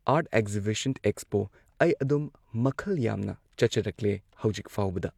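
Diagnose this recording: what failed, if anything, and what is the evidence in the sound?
Nothing in the signal chain failed: the speech arrives continuous and intact at every stage from capture to playback, with no audible sign of trouble in the wiring, conversion, buffering, transmission or storage.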